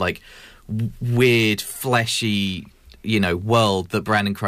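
A speech recording affected throughout by a block size mismatch (truncated). A steady buzz at about 46.9 Hz runs under the whole clip. That rate fits one stage writing 1024-sample blocks, for example at 48 kHz, while the next stage reads fewer samples and drops the tail of each block. Every discarded tail leaves a discontinuity, and these repeat at the block rate to form the buzz. Pitch and pacing stay at about normal speed.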